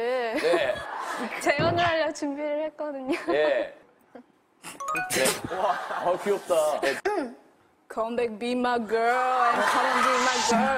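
From 0.86 to 4.33 s, de-emphasis applied wrongly muffles the sound: treble slopes gently away, about 8 dB at 10 kHz, unlike a low-pass's abrupt cutoff.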